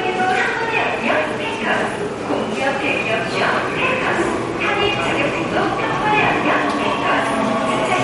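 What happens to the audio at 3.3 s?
MP3 compression is audible at 3.3 s, as it is across the whole clip rather than as a single event. Nothing survives above 11.2 kHz, where a starved encoder has chopped the treble at a fixed cut-off, and weak frequency lines drop in and out from frame to frame. The result is a plainly watery, swirling texture with smeared attacks, which fits a low bitrate around 48 kbps as the likely cause.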